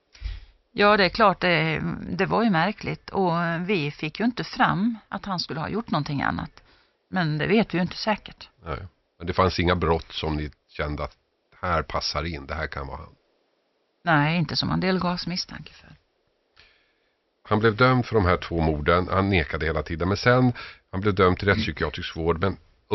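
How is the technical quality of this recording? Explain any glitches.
The technical quality of this recording is sound, with no glitches to explain.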